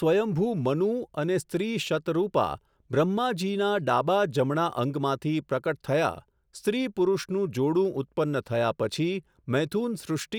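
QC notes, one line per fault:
0.16 to 10.36 s, clock slip clicks: Faint, evenly spaced ticks run through the speech, about ten each second, roughly a hundred in all. They are clearest on loud, sustained sounds and vanish in pauses. The likely cause is two devices running on separate, unsynchronised clocks, drifting apart by around 300 ppm. Each time the gap reaches a full sample, one sample is dropped or repeated, leaving a tiny step in the waveform.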